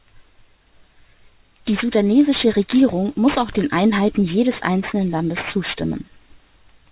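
Aliasing runs through the whole clip. The speech was taken down to a much lower sample rate with no anti-alias filter first, which fits a conversion to 8 kHz from a 44.1 kHz source. Everything above 4 kHz folds back below that edge as false, unrelated tones sitting only around 15 dB under the speech itself. Sibilants come out gritty and metallic, and the spectrum stays dense right up to the 4 kHz band edge instead of rolling off.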